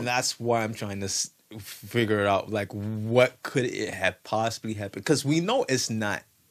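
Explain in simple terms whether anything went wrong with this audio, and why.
Nothing went wrong here.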